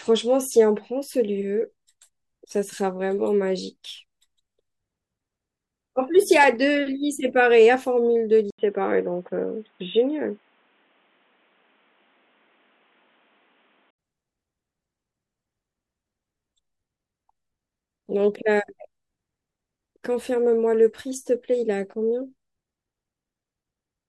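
From 8.51 to 13.99 s, after an 80 ms gap, the speech turns dull, with nothing above 3.8 kHz. The input likely switched to a poorer device.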